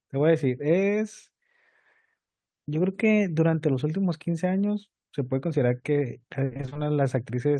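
From 6.45 to 6.77 s near the end of the speech, there is repeated packet loss (robotic sound). Over this 0.32 s stretch the stream drops out again and again, and each hole is bridged by extending the preceding sound. The chopping suggests about seven separate losses, the longest about 60 ms. Roughly 180 ms, more than half the span, is stand-in audio. The result is a choppy, robotic stretch with pieces missing.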